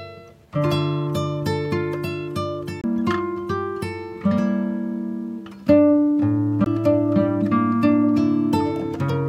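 CD skip at 2.81 to 2.84 s and again at 6.64 to 6.66 s: the laser lost its track, probably from a knock or a flaw on the disc, and landed on another turn of the spiral. Each time the output cuts out briefly, roughly 30 ms in the first event and somewhat less in the second. Playback then picks up from a different point, so the sound jumps abruptly instead of continuing.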